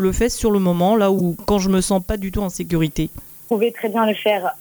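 From start to finish the audio carries low bit depth with noise shaping. The signal is quantised to only 7 bits, and the rounding error is filtered so that most of it is moved toward high frequencies instead of being spread evenly. The result is a constant, thin hiss that sits roughly 20 dB below the signal and grows markedly brighter toward the top of the band. It stays the same level whether the sound is loud or quiet.

At 1.18 to 1.21 s there is damaged data in a compressed stream. A short span of corrupted bytes makes the decoder misread the frames there, lose sync and hunt for the next valid frame header. This comes through as a brief chirp or blip. The same fault returns at 3.46 to 3.52 s, where it is longer and the disturbance lasts longer before normal decoding resumes.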